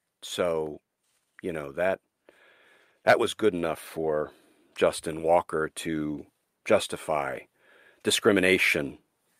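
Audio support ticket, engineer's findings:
Findings: no fault heard in the speech audio attached to this ticket.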